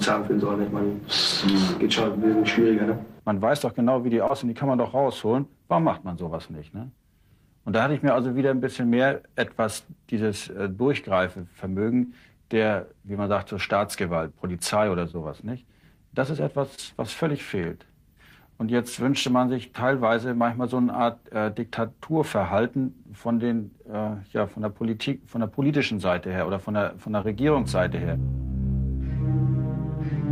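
Six instances of short concealed packet loss affect the audio, at about 1.51, 4.27, 12.05, 15.11, 16.75 and 27.21 s. Each time, roughly 20 ms of data arrived too late, and the decoder bridged the gap by extending the preceding sound before crossfading back, leaving a brief smear or wobble. On a spectrogram, each spot shows a short stretch of smoothed, repeated harmonics or flat noise, and the waveform shows a slightly too-regular patch.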